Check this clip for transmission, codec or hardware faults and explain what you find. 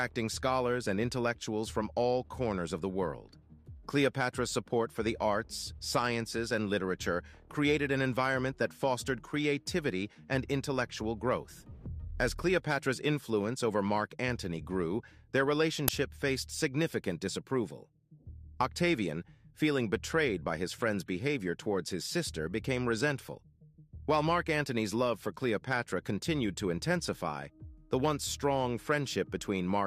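One fault is present: an uninitialised buffer at 15.88 s. A 5 ms block was sent to the output before any audio had been written into it, so whatever leftover memory it held was played as samples, producing a brief, loud crack.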